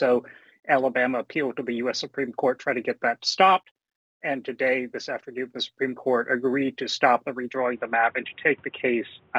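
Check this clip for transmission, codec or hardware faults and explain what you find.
An input switch to a poorer device occurs at 7.56 s and lasts to the end. The system likely changed microphones mid-recording. From there nothing passes above 3.8 kHz, so the sound turns dull and boxy, with no gap and level roughly unchanged. A new, faint noise floor appears, about 35 dB below the signal.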